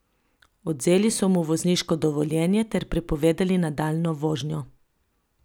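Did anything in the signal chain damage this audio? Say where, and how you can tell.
No, the signal chain shows no sign of having damaged this speech recording, and nothing heard in it points to a problem at any stage.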